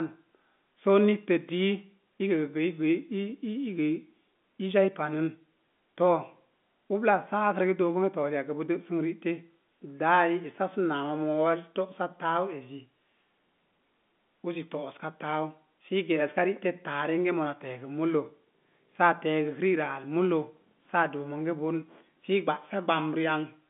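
Nothing in the speech reveals any technical fault.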